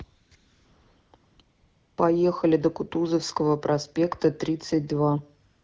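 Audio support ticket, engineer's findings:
AMR comfort noise at 0.03–0.31, 0.35–1.13, 1.15–1.39, 1.41–1.97 s and 5.49 s to end. Sender's silence detection halted speech frames, and the receiver synthesized a steady, smooth background. Spectrogram shows flat, featureless noise blocks with hard edges. Wideband speech sounds light-coded, pointing to a 12.65 kbit/s AMR-WB mode.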